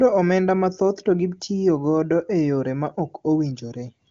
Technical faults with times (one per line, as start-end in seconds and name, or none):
none